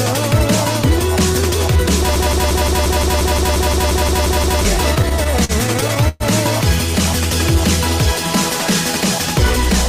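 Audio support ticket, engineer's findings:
Broken-record loop, 2.16 to 4.65 s. A 175 ms fragment repeats exactly, back to back, 14 times. Likely a stalled player, encoder or stream resending its last held buffer. The audio due in that span never plays. It is lost, not delayed.

Repeated stalls (stutter), 4.95 to 6.23 s. There are 14 short dropouts, each bridged by stretching the preceding sound. About 294 ms is concealed in total, roughly a quarter of the span. The longest gap is 116 ms. The fault points to the jitter buffer running dry as packets arrived late. Nothing is missing. The sound drags and stutters.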